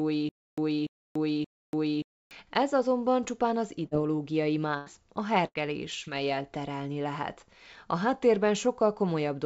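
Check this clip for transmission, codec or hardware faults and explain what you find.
The speech has three kinds of transmission fault: a repeating stall at the start, three bursts of packet loss, and one short concealed packet loss.

From 0.0 to 2.31 s, already under way when the clip begins, there is a stutter with silent gaps. The likely cause is a stalled stream that replays its last 0.29 s fragment, then runs empty for 0.29 s. That burst returns every 0.58 s, three times, and the speech meant for that span is lost.

Bursts of packet loss occur at 3.86 to 3.94 s, 4.78 to 4.89 s and 5.46 to 5.58 s. Runs of packets arrived too late, about 60, 90 and 90 ms. The receiver stretched the last sound into a fading buzz or hiss, then jumped ahead past the missing speech.

At 6.04 to 6.09 s, a short concealed packet loss of about 30 ms was patched by extrapolating the preceding sound. It is heard as a brief smear before the real audio blends back in.

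Throughout, the call path's coding caps the band at 8 kHz, which fits a G.722 wideband codec.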